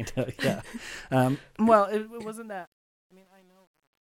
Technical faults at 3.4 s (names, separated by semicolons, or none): truncation distortion on a fade